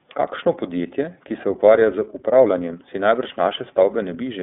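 iLBC codec coding runs throughout, passing roughly 200 Hz to 3.6 kHz with nothing above 3.7 kHz. Each 30 ms frame's excitation is coded on its own, which fits the 13.33 kbps mode, leaving the speech muffled, plainly rough and synthetic.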